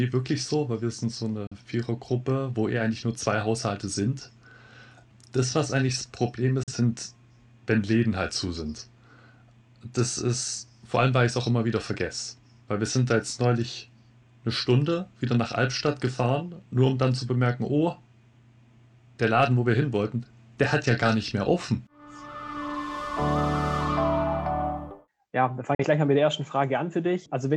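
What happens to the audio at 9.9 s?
Nothing goes wrong at 9.9 s; the audio plays through that moment intact, with no dropout, click, glitch or other fault.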